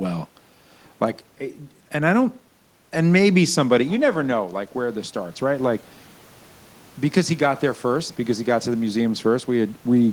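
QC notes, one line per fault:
2.93–5.85 s, automatic gain rising: The input fell by about 9 dB as the talker moved back around 4 s. The gain control slowly raised its gain by about 4 dB over nearly three seconds. Voice and room noise swell together.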